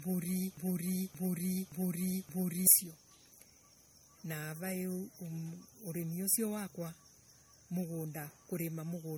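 A speech recording that sounds swirly, smeared and hollow throughout, with blurred consonant attacks. This is generation loss, likely from repeated lossy re-encoding: the character fits MP3 at around 64 kbit/s applied about three times, with each pass requantising on a shifted frame grid so noise and spectral holes accumulate. From 0.57 s to 2.67 s a broken-record loop takes over: a fragment of about 0.57 s plays four times back to back, identical each time, and whatever should have sounded in that span is missing. The likely cause is a playback, encoder or stream stall that kept resending the last buffered piece.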